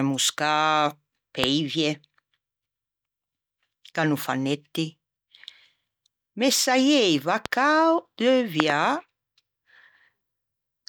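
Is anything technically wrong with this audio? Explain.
Yes: loud pops at 1.44–1.46 s, 7.46–7.48 s, and a double pop at 8.60–8.72 s, roughly 15 to 20 dB above the speech. A voltage spike, likely from a switch or static, gives a thump under which the speech continues, unlike a plosive's breath burst.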